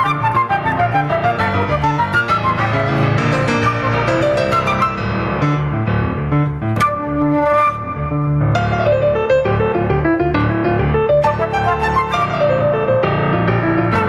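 Right from the start and all the way through, there's gain pumping. The level keeps swinging by something like 15 dB. The likely cause is input gain set way too hot, with a fast limiter or compressor clamping down on each loud moment. Loud and soft parts get squeezed together, so the whole thing sounds flattened and breathing.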